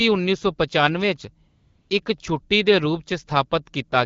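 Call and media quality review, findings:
AMR comfort noise, 1.47 to 1.89 s. Background replaced by steady, smooth synthetic hiss for 0.42 s. Sender stopped speech frames; receiver generated noise from coarse level estimate. Wideband speech around it sounds clear.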